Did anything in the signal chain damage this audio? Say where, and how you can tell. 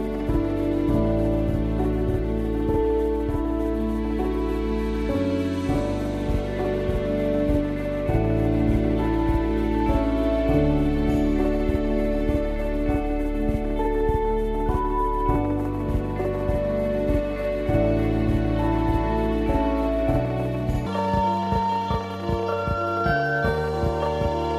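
Yes. A section at the wrong speed runs from 20.86 s to 24.59 s: the sound suddenly plays 1.56 times faster, with pitch jumping by roughly seven semitones, so tempo and pitch shift together. That points to a clock mismatch, likely at the editing or playback stage.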